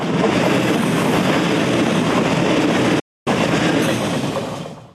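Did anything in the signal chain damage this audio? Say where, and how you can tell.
Yes, at the broadcast reception stage: a digital broadcast dropout from 2.99 to 3.27 s. The audio fades out over about 8 ms to silence and resumes roughly 0.26 s later, consistent with about eleven failed frames. Network concealment would fill the gap; this receiver mutes.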